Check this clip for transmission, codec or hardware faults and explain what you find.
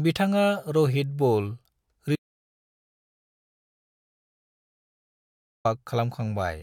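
One fault: an audio dropout to silence from 2.16 s to 5.65 s. The speech cuts off abruptly into dead digital silence, with no room tone, for about 3.5 s, then resumes mid-flow. The input was likely lost while the recorder kept writing zeros, so that stretch of speech is gone.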